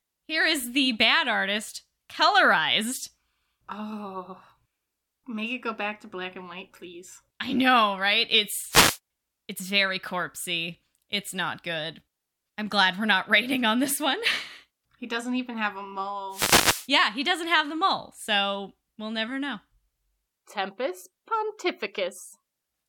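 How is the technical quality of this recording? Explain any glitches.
The recording has two wireless microphone noise hits. The first runs from 8.69 to 8.99 s, right after "please I know right" and before "it's very corpsey". The second runs from 16.30 to 16.88 s, just after "doesn't even have a". Each time the FM radio link fades as reflections cancel, so receiver noise swells into a hissing swish of static. Unlike a digital dropout, the sound is buried under rising noise rather than cut to silence.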